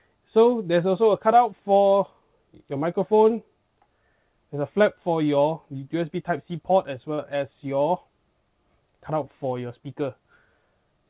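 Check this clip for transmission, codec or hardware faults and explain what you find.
One transmission fault stands out, a short concealed packet loss at 7.14 to 7.20 s. Across those 40 ms the sound briefly smears and wobbles, as if held in place. Audio for that stretch never reached the decoder in time, so the receiver synthesised a stand-in by extending the preceding sound, then crossfaded back into the real signal. The band-limited sound of the call path, with nothing above 4 kHz, fits a G.711 link.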